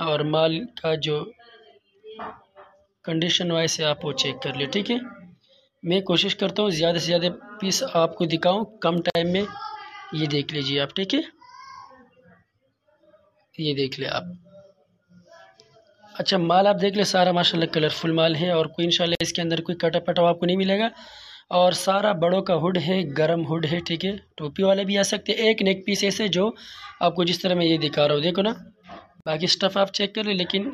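A single bit error spike at 8.98 s gives one sharp tick, a two-sample jump in the waveform and a thin full-height line on the spectrogram. Gaps at a join of encoded pieces open at 9.10, 19.15 and 29.21 s, roughly every 10 s and 51 to 54 ms long. Each is a flat stretch in the waveform and a blank vertical band on the spectrogram, left by encoder delay and final-frame padding where separately encoded pieces were joined untrimmed.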